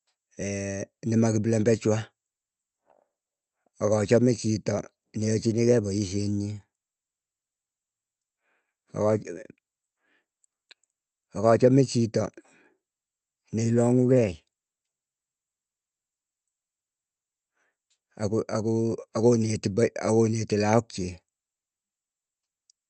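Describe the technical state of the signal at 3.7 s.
At 3.7 s the speech is intact, with no fault in the signal; it carries only the ordinary character of the Opus call path, whose audio band stops at about 8 kHz.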